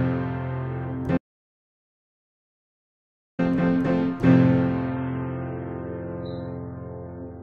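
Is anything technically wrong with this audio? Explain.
Yes, there are two faults. An audio dropout to silence runs from 1.18 to 3.39 s: the input was likely lost while silence kept being written, so the sound cuts to 2.2 s of dead silence. The waveform is flat and the spectrogram blank.

From 4.88 s to the end, the stream switches to a lower bitrate after the connection slows. Treble vanishes above 4.4 kHz, a sharp ceiling on the spectrogram, which fits a drop from 96 to 16 kbit/s.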